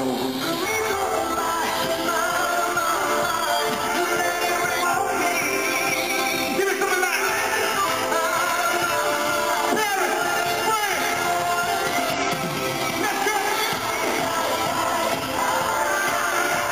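Damaged data in a compressed stream at 0.61–0.66, 4.79–4.85, 7.81–7.86 and 12.12–12.22 s gives brief blips where the decoder misreads corrupted frames and loses sync.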